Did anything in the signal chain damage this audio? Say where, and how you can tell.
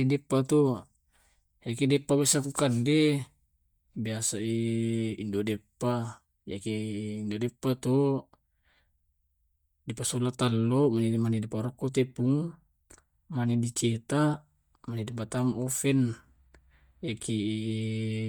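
Yes. Bluetooth LC3 compression is audible across the whole speech clip, likely at the codec stage. The upper spectrum sounds breathy and grainy where coarse quantisation and noise filling replace detail, consistent with 10 ms frames at around 48 kbps, with nothing above 20.1 kHz.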